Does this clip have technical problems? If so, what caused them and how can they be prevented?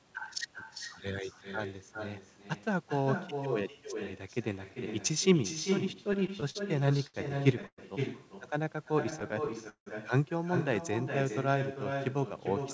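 Yes. Echo with no canceller: the far end played the call over a loudspeaker and its microphone sent it straight back. Throughout the clip, the speech is trailed by a thinner copy about 7 dB quieter, arriving roughly 400 ms later. Enabling acoustic echo cancellation at the far end, or having that listener wear a headset, prevents this.

Repeated stalls (stutter): packets kept arriving late, so the jitter buffer repeatedly ran dry and the receiver stretched the last sound to cover each wait. From 6.04 to 7.16 s there are ten short hitches, the longest 70 ms, with about 18% of that stretch filled in. From 9.04 to 9.88 s there are eight, one lasting 170 ms, with about 27% filled. Nothing is lost, but the speech drags and stutters. A steadier network path, or a larger jitter buffer target, prevents this.

Call audio freeze: from 7.67 to 7.80 s the sound hangs as a fading continuation and then about 50 ms of silence, adding roughly 110 ms of delay before the speech resumes where it stopped. 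The likely cause is a burst of held-up packets that emptied the jitter buffer. Reducing congestion on the link prevents this.

Jitter buffer slow-down: the buffer was running low or had just raised its target delay, and it built up a reserve by repeating single pitch periods. From 8.46 to 8.92 s the speech plays at about 88% speed at unchanged pitch, adding 60 ms and sounding drawn out. A more stable network, which keeps the buffer from draining, prevents this.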